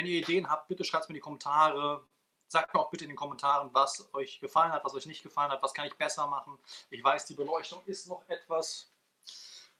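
At 2.06 s there is a short stall from a late packet. The sound hangs for about 43 ms, until about 2.13 s. A second one follows at 2.64 s, holding about 38 ms to 2.71 s. Each time a packet arrived late and the jitter buffer ran dry. The receiver stretched the last sound to fill the wait, then resumed where it stopped. Nothing is lost. Each hold adds its length to the playback delay.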